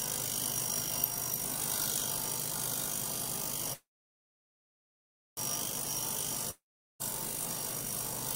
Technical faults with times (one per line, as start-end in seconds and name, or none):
3.73-5.39 call audio freeze
6.51-7.02 long network dropout